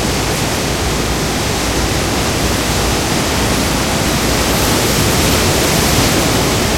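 From 5.38 to 6.75 s a train of clicks rides over the sound, about seven sharp pops at an uneven 4.4 per second, roughly as loud as the sound itself, likely from electrical interference. A waveform shows matching thin spikes; a spectrogram shows full-height vertical lines.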